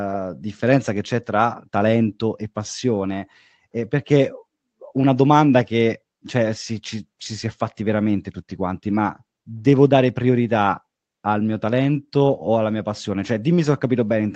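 No technical faults can be heard anywhere in it.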